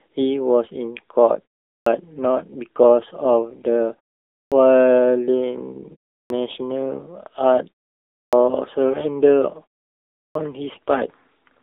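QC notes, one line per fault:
throughout: AMR narrowband mobile codec. The speech sits in a phone-line band of roughly 250 Hz to 3.7 kHz with nothing above 3.8 kHz, and at 7.95 kbps the pulse-driven vocal-tract model leaves it plainly buzzy and synthetic, like a 2G or 3G call.
1.77, 4.43, 6.21, 8.24 and 10.26 s: clipped start after a pause. After each gap of 0.33 to 0.67 s, the first 87 to 94 ms of the next phrase goes missing, so it jumps out of silence without its opening. The output device is likely dozing in the pause and not waking fast enough.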